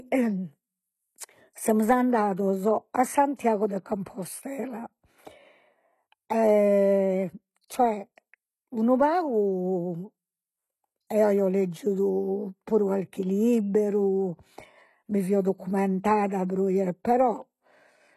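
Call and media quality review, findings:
Whole clip: treble sounds synthetic, s sounds gritty and a bit lispy, nothing above 12.3 kHz. Likely HE-AAC compression; the codec rebuilds the top band from copied lower bands, so the harmonics don't line up. Damage plainly audible, fits roughly 16 kbps.

3.35 to 3.39 s, right after "semus andados a": a short hiss smears in ahead of an attack. Pre-echo, about 37 ms. The codec spread its quantisation noise across the whole block, so the noise sized for the loud onset lands before it.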